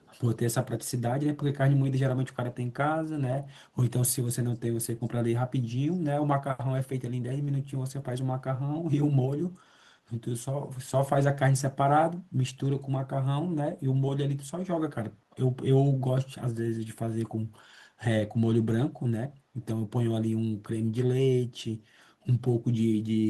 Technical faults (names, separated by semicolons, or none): echo leak